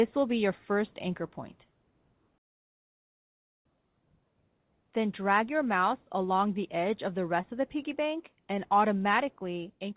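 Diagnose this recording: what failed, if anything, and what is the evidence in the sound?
At the network and jitter-buffer stage, a short concealed packet loss occurs from 7.42 to 7.45 s. About 20 ms of audio never arrived, and the decoder bridged the gap by extending the preceding sound, which is heard as a brief smear. An ordinary dropout would instead leave a hard gap of silence.

The loudspeaker feedback squeal is an acoustic fault in the playback room. From 8.32 s to the end, a single tone at 6.2 kHz swells over roughly one and a half seconds to about 5 dB above the audio. It sits above the 4 kHz limit of the G.711 call band, so the tone entered after the codec. Its steady single pitch and gradual growth distinguish it from codec whistle or clipping distortion.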